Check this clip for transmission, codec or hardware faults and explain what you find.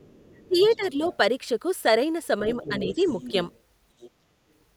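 The speech has two echo-control faults, recurring through the clip.

Other side's voice leaking through, at 0.0–0.86, 1.04–1.17, 2.52–3.31, 3.52–3.59 and 4.0–4.1 s: the echo canceller likely left loudspeaker pickup in the microphone signal. A faint second voice sits under the talker, usually about 25 dB down, rising to about 15 dB below at 2.52–3.31 s and barely audible at 3.52 s.

Speech suppressed in double talk, at 0.48–0.57, 0.76–0.99 and 2.68–3.01 s: while both sides spoke, the canceller likely misjudged the talker's voice as echo and attenuated it. The talker dips by about 15 dB first, then about 10 dB, then only slightly at the last.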